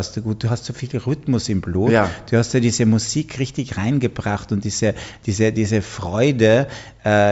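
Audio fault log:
No technical faults can be heard anywhere in the audio, and the signal stays steady and continuous throughout.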